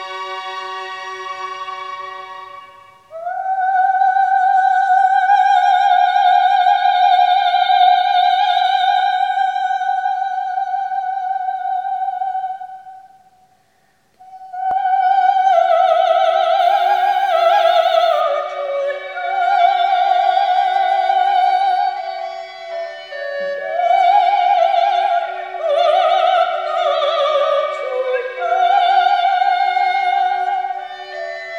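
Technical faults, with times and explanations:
16.59 to 18.21 s, unreliable data bit: for this stretch one data line is marginal, so its bit flips in a random share of samples, each flip adding a same-sized spike of about -40 dBFS. Those scattered identical jumps pile up into a steady crackly fizz sitting over the sound.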